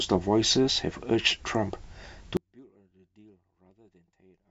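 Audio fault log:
2.37 s to end: audio dropout to a faint residue. The speech cuts off abruptly and only a faint leak remains, roughly 35 dB down, likely because the wanted signal was lost while the path stayed live. The sudden drop to a residue rules out a pause or fade.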